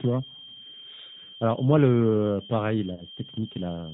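A switching supply whistle runs through the whole clip: a thin tone wandering between about 3.13 and 3.21 kHz, roughly 15 dB below the speech. A spectrogram shows it as a narrow horizontal line that drifts slightly in pitch, steady beneath every syllable.

The speech also carries plainly audible G.729 codec damage. The low-rate coder rebuilds the voice from a vocal tract filter, a pitch predictor and a few pulses per frame, which fits an 8 kbit/s link. The result sounds rough and slightly synthetic. On a spectrogram, energy stops abruptly at 4 kHz, and the harmonics look grainy rather than clean.

From 2.94 to 3.05 s, VoIP packet loss is concealed by the speech codec. About 40 ms of audio went missing, which points to two lost packets. The decoder kept extending the last pitch and filter, so the sound smears into a buzzy tone or coloured noise that fades, and the voice stays weak briefly after packets return. 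The waveform shows a decaying, overly regular stretch, and the spectrogram shows frozen, flattened harmonics.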